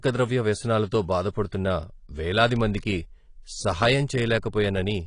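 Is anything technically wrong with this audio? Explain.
Yes. AAC compression runs through the whole speech clip: nothing reaches above 10.2 kHz, and the damage is plainly audible as dull, smeared sibilants with a warbling, fizzy texture. This is likely low-bitrate AAC-LC, fitting roughly 32 kbps, quantising coarsely and lowering the cut-off.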